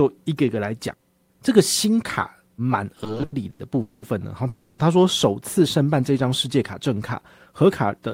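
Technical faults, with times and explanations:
2.95–3.61 s, repeated stalls (stutter): the speech drags and catches through eleven brief gaps, the longest 90 ms, each bridged by continued sound; late packets kept emptying the jitter buffer.
3.81–4.04 s and 4.48–4.81 s, call audio freeze: the speech halts for 0.21 s, then 0.31 s, holding a fading buzz before resuming where it stopped; delayed packets likely drained the jitter buffer.
7.64–8.07 s, jitter buffer speed-up: the speech runs about 8% faster at unchanged pitch and sounds hurried, as the receiver snipped out some 40 ms of pitch-period pieces to reduce excess buffered delay.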